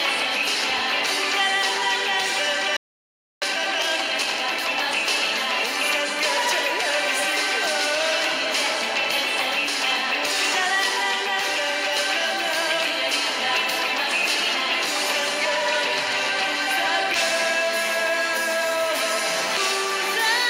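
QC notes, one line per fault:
2.77–3.42 s, playback stall: the sound cuts off mid-flow and the output goes silent for about 0.65 s before resuming. This is likely the player running out of buffered data or having its playback thread blocked, so nothing reached the output until it recovered. On a waveform this is a flat, near-silent stretch between two stretches of normal signal. On a spectrogram it is a near-empty vertical band across all frequencies, with abrupt edges on both sides.
3.42–4.72 s, time-compressed catch-up: straight after the gap the audio plays hurried at roughly 1.5 times normal speed while keeping its original pitch. The player is clearing the backlog built up during the stall by cutting out short pieces and cross-fading across the joins. On a spectrogram, events are packed closer in time but harmonics stay at the same frequencies. On a waveform, envelopes look compressed horizontally, with small irregularities at the splice points.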